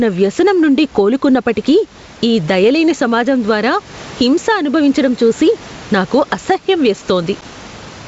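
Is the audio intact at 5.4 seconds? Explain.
No. Gain pumping runs through the whole clip, including 5.4 s. The gain ducks under loud sounds, swinging about 10 dB, likely from a fast limiter behind excessive gain.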